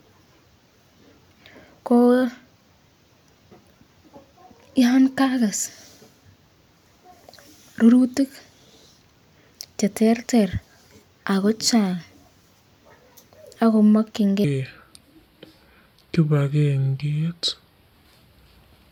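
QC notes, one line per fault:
14.44–18.92 s: section at the wrong speed. The speech slows to 0.739x, about five semitones lower, sounding deep and dragged, likely from playback against the wrong clock. On a spectrogram, harmonics and formants shift downward and stretch in time. On the waveform, syllable envelopes widen.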